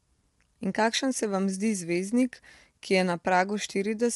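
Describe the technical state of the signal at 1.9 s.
At 1.9 s the speech is rough and grainy, with noise filling the gaps between harmonics and nothing above 11.6 kHz, and this runs through the whole clip. That points to low-delay AAC compression, likely AAC-ELD near 32 kbps, whose short frames smear pitch harmonics in a way a plain low-pass cutoff would not.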